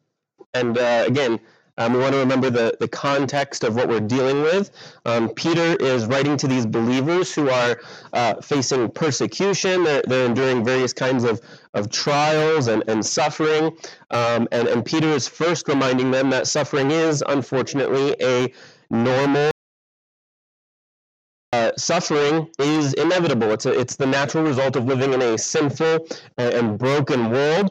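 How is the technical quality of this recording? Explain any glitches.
At 19.51 s the audio cuts off abruptly mid-flow and the track falls to silence, with no room tone or background underneath, until the sound returns just as abruptly at 21.53 s. This is an audio dropout to silence lasting about 2.02 s. The likely cause is the input signal being lost briefly, through a disconnected device, a failed link or an accidental mute, while the recorder kept writing silence, so whatever sounded in that gap is gone.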